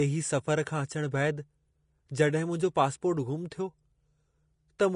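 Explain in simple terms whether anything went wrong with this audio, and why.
From start to finish the speech sounds grainy and hissy, with nothing above 10.5 kHz, likely from heavy Vorbis compression. Unlike simple muffling or steady background hiss, the roughness follows the voice itself, because fine treble detail was swapped for noise-like grit.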